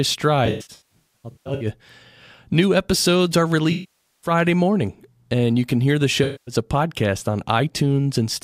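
AAC frame loss with concealment hits the speech at 0.45 to 1.66 s, 3.72 to 4.31 s and 6.24 to 6.55 s. The decoder loses compressed frames and patches each gap from the last good spectrum, so the sound turns smeared, noisy or phasey. The first stretch is broken up, with about 830 ms missing in gaps up to around 150 ms. The second loses about 510 ms, the third about 230 ms.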